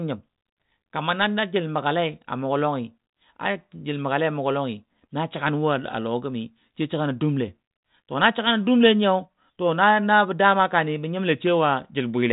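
The speech has no technical faults, passing through a G.726 telephone path at 40 kbit/s that leaves at most a faint trace of its coding and carries nothing above 3.8 kHz.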